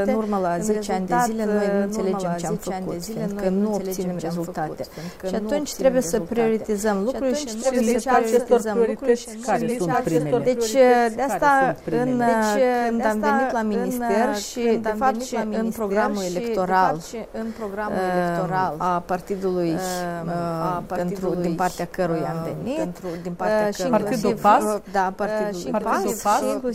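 A doubled audio track runs through the whole clip. A second copy of the sound trails the original by about two seconds. It sits roughly 5 dB lower. The copy is full-band and dry, with no decay or room colour, so it reads as a clean repeat rather than an echo. Everything heard returns two seconds later underneath newer material. This is likely caused by a slower second capture path or an edit holding two misaligned copies.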